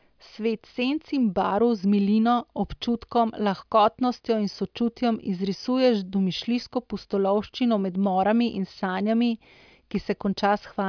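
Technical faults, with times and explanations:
No technical faults can be heard in this speech recording, and its signal holds steady with nothing breaking into it at any point.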